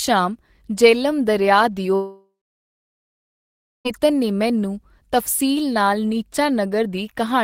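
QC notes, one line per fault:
1.95–3.87 s, long network dropout. Just after "ਜਿਹਲਮ ਦਰਿਆ" the speech breaks off for about 1.9 s. The last sound is drawn out into a fading buzz for a few tenths of a second. About 1.5 s of near silence follows. Speech returns at "ਨੇ ਮੈਨੂੰ ਤਫਸੀਲ ਨਾਲ" with the missing stretch simply gone. The likely cause is a long break in packet delivery. The receiver masked the gap by repeating and fading the last audio, then went quiet.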